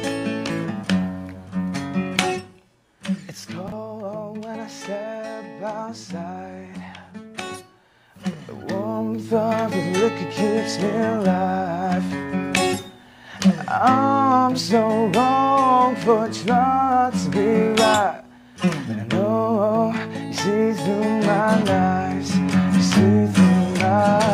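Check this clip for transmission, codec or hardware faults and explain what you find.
One fault stands out: zipper noise between 8.34 and 9.48 s. During that stretch the level moves by around 10 dB, but in 1 dB jumps rather than a smooth ramp, about seven per second. Each jump is an unsmoothed gain change that puts a small click into the waveform, so a ticking texture rides on the sound while the level shifts. Unlike random crackle or dropout clicks, these ticks come at a steady rate and stop as soon as the level settles.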